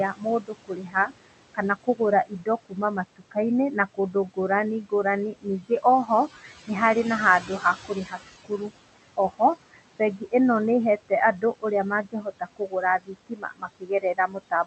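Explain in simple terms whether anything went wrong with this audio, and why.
Two related problems can be heard, and both come from the noise suppressor, the part of the call chain that tries to remove background noise.

The first is noise suppressor artifacts, present for the whole clip. The room has some background noise. That noise is normal, but the suppressor pushes it down hard between words and lets it come back underneath them. So the background seems to pump up and down.

The second is speech cut by the noise suppressor. Here the suppressor mistakes parts of the speech for noise and turns them down too. Soft sounds, word endings and quieter moments come out faint or swallowed. This happens in six stretches: 0.09 to 3.37 s (about a second and a half of it affected), 3.74 to 4.49 s, 4.82 to 7.05 s, 7.4 to 10.33 s (about a second affected), 10.98 to 11.64 s, and from 12.03 s to the very end. 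In the shorter stretches only brief bits are lost.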